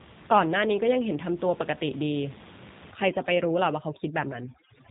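Throughout, the speech carries G.729 codec damage: rough, slightly synthetic timbre consistent with 8 kbit/s VoIP coding, and a spectrogram showing a hard ceiling near 3.8 kHz.

From 2.91 s to the end, overdone noise removal strips bands near the estimated noise floor. The room noise, about 19 dB below speech, drops and breaks up into twinkling specks. On a spectrogram this appears as scattered isolated dots and gaps in the quieter speech components.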